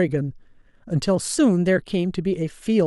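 No technical faults can be heard anywhere in the speech recording; the signal stays continuous and steady throughout.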